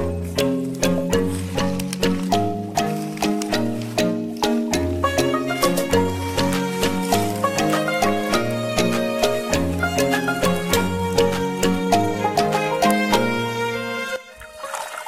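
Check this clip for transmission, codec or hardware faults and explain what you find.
Sample clock jitter runs through the whole clip. The converter's sampling instants wander by a few microseconds at random, so each sample is taken at the wrong point on the waveform. The error grows on steep slopes, sitting around 30 dB below the signal, heard as a hiss or roughness riding on loud and bright passages that disappears in silence.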